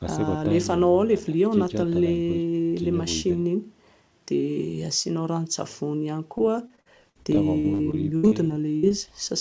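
Speech that turns choppy and robotic from 6.38 to 9.11 s, with pieces dropping out. This is repeated packet loss, with gaps up to 71 ms. About a fifth of that span is concealed by extending the previous sound. The call path stops near 8 kHz, which fits a G.722 wideband codec.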